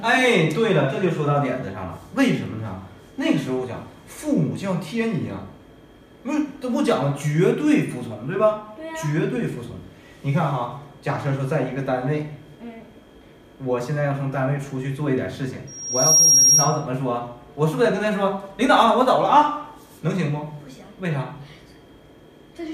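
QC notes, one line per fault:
15.67–16.86 s, loudspeaker feedback squeal: a 5.6 kHz tone swells over about half a second to around 10 dB above the sound. The mic-to-speaker loop gain exceeds one there.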